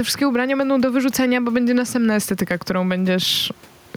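Gain pumping runs throughout the speech. The background swells in each pause and ducks under loud syllables, swinging around 10 dB, which is likely from gain set far too high with a fast limiter clamping it. Waveform peaks look flattened, and a spectrogram shows the faint room noise brightening between syllables.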